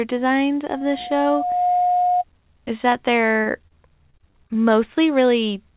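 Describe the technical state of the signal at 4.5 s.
Choppy, robotic speech with small pieces missing: repeated packet loss from 4.10 to 4.56 s, six gaps up to 36 ms each, patched by extending the preceding sound.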